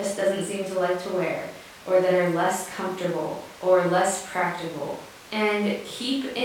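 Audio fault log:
Listening closely to the speech in this recording, nothing stood out as a problem at any point.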